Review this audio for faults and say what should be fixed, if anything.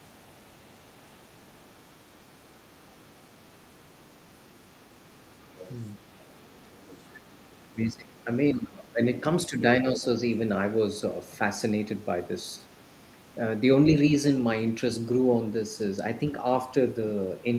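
Other side's voice leaking through: the echo canceller likely failed to fully remove the loudspeaker playback from the microphone signal. The far side's voice therefore comes through faintly, about 30 to 40 dB below the talker, from 0.0 to 9.18 s, 9.97 to 11.19 s, 11.96 to 13.6 s and 15.02 to 17.59 s. Better echo-path modelling, a headset, or lower loudspeaker volume would keep the far side out of the microphone.

Speech suppressed in double talk: between 7.68 and 10.04 s both sides talk at once, and the echo canceller likely could not separate its own talker from the loudspeaker echo, so it attenuated both. The talker's speech drops by as much as about 20 dB, for roughly 1.5 s in total. A canceller with reliable double-talk detection would keep near-end speech at full level while the far side is also speaking.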